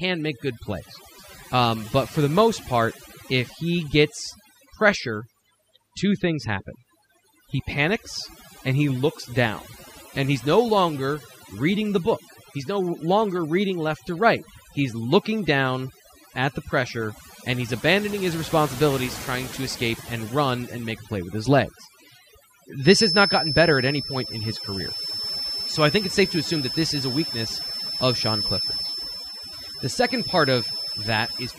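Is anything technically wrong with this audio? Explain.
Yes: overdone noise removal runs through the whole speech clip. The noise reduction was set too aggressively, cutting individual frequency bands whenever they sat close to its noise estimate, taking the softer parts of the voice with them. Pauses collapse into near silence with twinkling specks.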